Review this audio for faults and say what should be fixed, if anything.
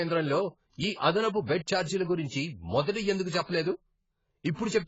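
AAC compression, throughout the clip: the speech has nothing above 7.7 kHz, so it sounds dull and boxed-in, and the damage is heavy. Sibilants come out fizzy and smeared rather than crisp, and held sounds take on a warbling texture where the encoder has thinned out or patched over parts of the spectrum. That points to AAC-LC at a very low bitrate, which fits roughly 16 kbps, as the likely cause. To prevent it, encode speech at a higher bitrate or keep a lossless master and compress only once at the end.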